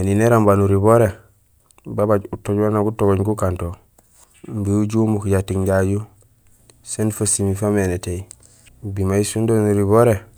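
No technical faults are audible anywhere in the recording.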